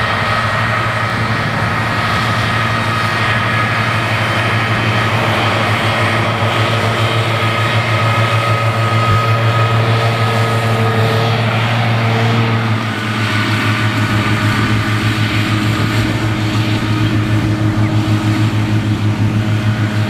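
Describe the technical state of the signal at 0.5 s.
At 0.5 s the signal is intact, with no dropout, clipping, distortion or other fault audible at that point.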